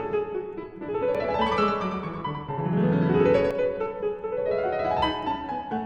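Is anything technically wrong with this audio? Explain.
Yes. From 1.15 to 3.51 s there is a doubled audio track, likely from a second, slower capture path mixing the same audio back in. A full-band copy trails about a tenth of a second behind, a few decibels quieter, with no decay, and it starts and stops abruptly.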